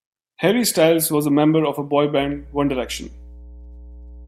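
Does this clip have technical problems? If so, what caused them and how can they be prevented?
Yes. Mains hum comes in at 2.18 s and runs to the end of the speech clip. It is a steady low tone at 60 Hz, sitting roughly 20 dB below the speech. That frequency points to the power line leaking into the signal path. A ground loop between connected devices, or a transformer close to a cable or input, couples the mains into the audio. Prevent it by keeping every device on one grounded outlet and routing signal cables away from power supplies.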